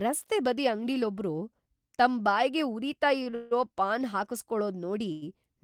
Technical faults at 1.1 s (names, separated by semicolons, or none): none